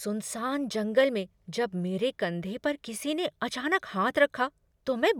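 No technical faults can be heard anywhere in the speech; the signal stays continuous and intact throughout.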